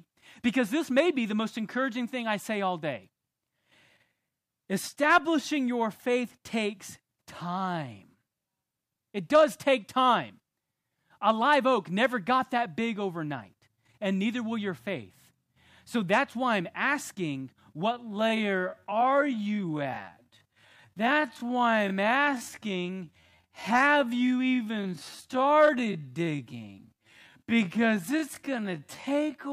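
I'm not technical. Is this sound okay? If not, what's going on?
No. From 17.91 s to the end, the speech is a time-stretched section: it abruptly slows to about 0.55 times normal pace while the pitch stays unchanged, so it drags. Software likely lengthened the audio by repeating short slices to fill a required duration.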